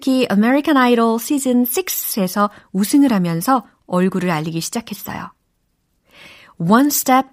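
Nothing in this speech recording stands out as a technical fault at any point, so there's nothing to flag here.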